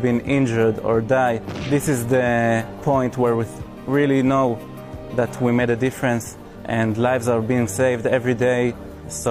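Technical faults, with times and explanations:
6.51 to 6.56 s, compressed frames skipped: the audio lurches forward here, losing a short stretch of sound, roughly 150 ms, which points to about three whole compressed frames of around 46 ms each going unplayed, either absent from the stream or rejected by the decoder as corrupt.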